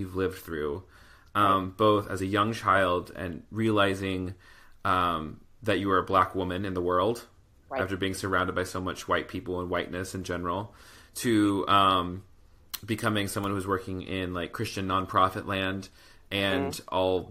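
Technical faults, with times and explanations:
2.18 s, damaged data in a compressed stream: a brief glitch after "lived through um both" as the decoder misreads corrupt bytes and resyncs.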